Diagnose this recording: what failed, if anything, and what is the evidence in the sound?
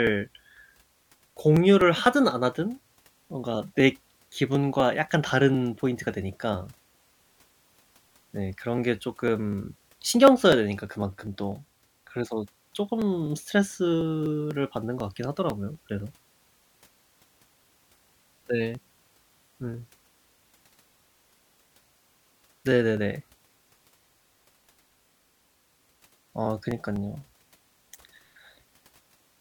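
Periodic USB or driver dropouts run from 0.07 s to 29.21 s. Ticks recur every 0.25 s, about four a second and around a hundred in all, and they are audible only where the speech carries signal. At the driver or buffer stage, a background task stalls the USB bus or audio driver at a fixed interval. Each stall skips roughly a millisecond of audio outright rather than filling it with silence, so the waveform jumps and clicks.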